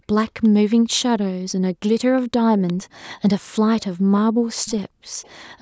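Faint delayed repeats of the speech surface at 0.28 to 0.49 s, 0.70 to 0.75 s, 2.67 to 2.73 s and 5.22 to 5.32 s. Each trails the original by 361 ms. This is echo leak, likely from a loudspeaker echo canceller letting residue through. The scraps sit roughly 20 to 35 dB down.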